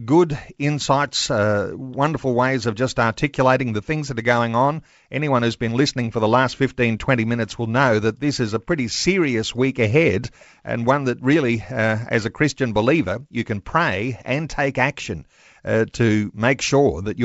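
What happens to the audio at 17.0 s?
Nothing goes wrong at 17.0 s: the speech continues intact through the G.722 wideband telephone coding, with no fault heard at that moment.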